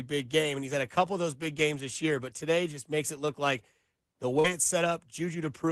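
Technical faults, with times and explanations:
0.39–0.45 s, 1.77–1.79 s and 4.44–4.50 s: lost packet rebuilt from error correction. Opus packets went missing: two, then one, then two. The next packet carried a low-bitrate copy of each, so nothing drops out. These 40 ms, 20 ms and 40 ms stretches sound rougher and noisier.
4.39–4.46 s: burst of packet loss. Audio stopped arriving. For about 45 ms the receiver kept extending the last sound and let it fade. Then playback resumed with about 40 ms skipped. Error-correction copies cover the tail, in audio that sounds like Opus at about 24 kbps with a 12 kHz top.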